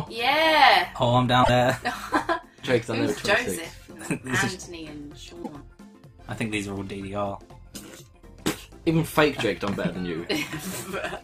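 Damaged data in a compressed stream throws the decoder out of sync twice, from 1.40 to 1.50 s and from 5.40 to 5.49 s, each time leaving a short glitch.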